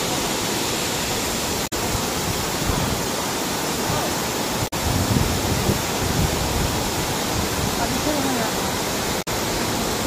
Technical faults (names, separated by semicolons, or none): damaged data in a compressed stream